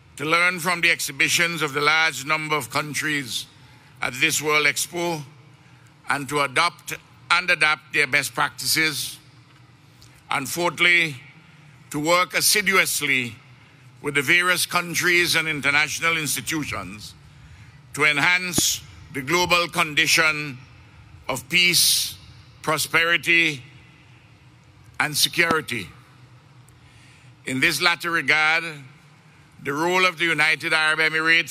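A single sharp pop cuts across the sound from 18.58 to 18.61 s, standing roughly 15 dB above it, and a second, harder one follows from 25.51 to 25.53 s at around 20 dB above, with the sound continuing underneath each. This is a loud pop, most likely a brief voltage spike from a plug, switch, static discharge or driver glitch, which the following circuitry turns into a short, punchy click rather than a dropout.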